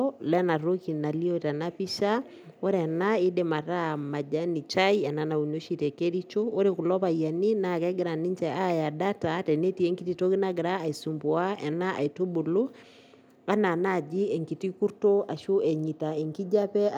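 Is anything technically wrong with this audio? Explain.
No, nothing is technically wrong with this audio.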